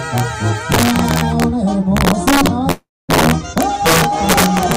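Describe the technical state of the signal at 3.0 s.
At 3.0 s the signal sits inside a call audio freeze running from 2.71 to 3.11 s, most likely a jitter buffer that ran empty. The last sound is stretched into a fading buzz and then goes quiet for about 250 ms. A spectrogram shows smeared, decaying bands ending in a blank strip, and nothing is lost afterwards. Throughout the clip there is also integer overflow. Peaks driven about 7 dB past full scale wrap to the opposite sign on a few percent of samples, producing sharp cracks. On the waveform these appear as tall vertical spikes flipping across the range.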